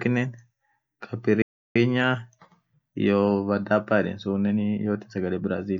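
Speech clip with a playback stall from 1.42 to 1.76 s. The sound cuts to silence for about 0.33 s, then resumes. The player likely ran out of data.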